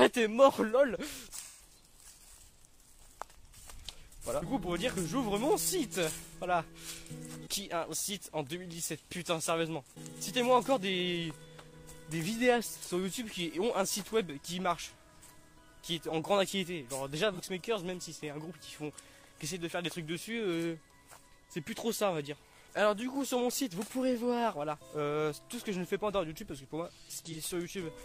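Smeared, noisy, phasey patches at 1.41–1.62 s, 6.19–6.34 s, 17.33–17.41 s and 27.25–27.38 s mark AAC frame loss with concealment. The decoder bridged gaps of 128, 85, 43 and 43 ms by reusing the last good spectrum with altered phase.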